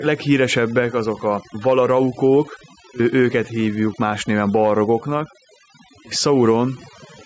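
From start to finish, overdone noise removal is at work. The denoiser was set too hard. It shuts off individual frequency bands whenever they sit near its noise estimate, and the softer parts of the speech go too. Gaps fall to near silence with twinkling specks.

Gain pumping also runs through the whole clip, with the gain swinging by around 5 dB. Loud and soft passages sit close in level and sound squashed. The likely cause is input gain set far too high, with a fast limiter clamping down on every peak. The call's microphone processing leaves nothing above 8 kHz, which is normal for that path.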